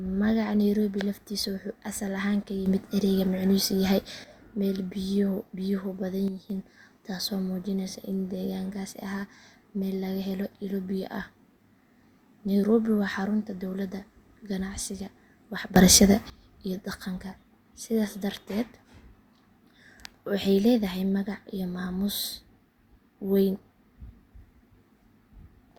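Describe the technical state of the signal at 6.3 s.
A sudden gain jump runs from 6.28 to 6.5 s. The level drops by about 6 dB from one sample to the next, with the background noise falling together with the speech. The likely cause is a gain change or bit shift applied without any ramp.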